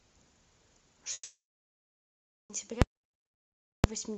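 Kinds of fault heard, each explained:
Long network dropout: from 1.13 to 2.51 s, a short fading buzz then flat silence, likely lost packets; the waveform flatlines and the spectrogram goes blank.
Invalid numbers at full scale: 2.82–3.84 s holds at one extreme value, a loud pop at each end with nothing between; waveform sits flat at one extreme, beyond the speech peaks.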